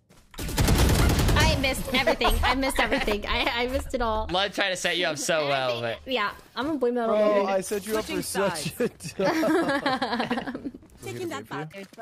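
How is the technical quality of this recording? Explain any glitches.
No glitches or faults turn up anywhere in the recording, so there is nothing to explain.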